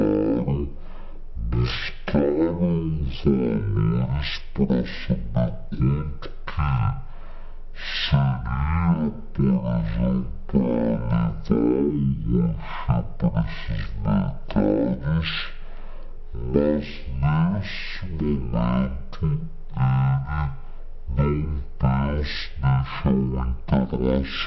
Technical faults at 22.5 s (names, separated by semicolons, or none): wrong sample rate